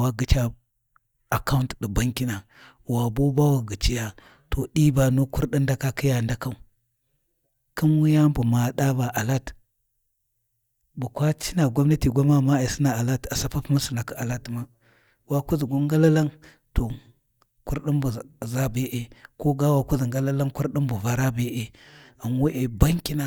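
No technical faults can be heard anywhere in the recording.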